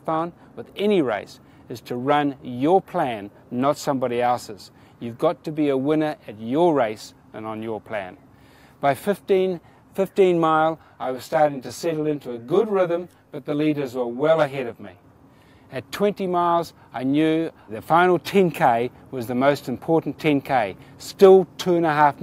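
Channel delay (comb filtering) runs from 10.82 to 15.04 s. One channel lags the other by around 20 ms, and summing them cancels shared content at evenly spaced frequencies starting near 30 Hz. The sound turns rough and slightly doubled.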